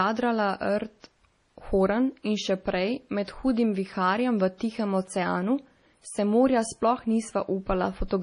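From start to finish the speech carries heavy MP3 compression damage, likely from a low-bitrate encode around 32 kbps: treble stops at 10.6 kHz, and dropped spectral lines leave a watery, swirling texture.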